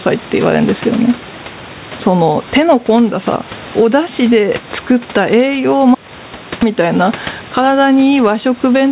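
Gain pumping runs through the whole speech clip. The level swings by around 10 dB. Loud and quiet passages sit close together, so the speech sounds squashed and breathing. The likely cause is input gain set far too high, with a fast limiter or compressor clamping down on each peak. The room noise sits about 29 dB below the speech.

An audio dropout to silence runs from 5.95 to 6.62 s. The sound cuts off abruptly, mid-flow. For about 0.67 s there is silence, with no room tone at all. The speech then resumes just as suddenly. Whatever was said in that gap is lost. The likely cause is a brief loss of the input, such as a dropped device, a failed link or a stray mute, while the recorder kept writing silence. The G.711 A-law call path at 64 kbps leaves nothing above 4 kHz, giving a narrow, telephone-like band.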